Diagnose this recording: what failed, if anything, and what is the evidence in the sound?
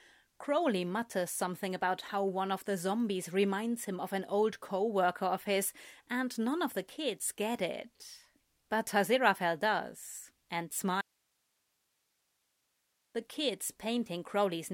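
At 11.01 s the speech cuts off abruptly, mid-flow, and nothing but a thin hiss, roughly 45 dB below the speech level, fills the next 2.1 s until the signal snaps back at 13.15 s. That is an audio dropout to a faint residue: the wanted signal vanished while everything downstream kept running and recording its own noise floor. The cause is likely an intermittent break in the analogue wiring, such as a loose connector or cable, ahead of a live input stage.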